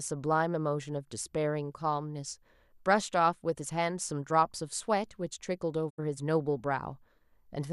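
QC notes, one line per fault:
5.89 to 6.00 s, digital broadcast dropout. The speech fades out over about 20 ms and falls silent. It stays muted until the signal resumes at 6.00 s. About 72 ms of programme is missing, which fits a few lost or corrupted frames. The receiver could not decode those frames, so it muted instead of playing damaged data. The quick fade keeps the cut from clicking. The speech returns later in the programme, and what was sent during the gap is gone.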